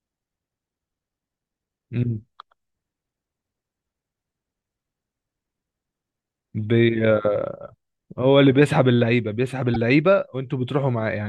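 At 9.74 to 9.76 s the speech is interrupted by a corrupt frame decoded event. A short run of a few compressed frames reached the decoder with flipped bits, and it played them as if they were intact. The misread gains and codes put energy in the wrong frequency bands for roughly 20 ms, heard as a chirp, squeak, blip or burst of noise. The burst peaks at about -10 dBFS.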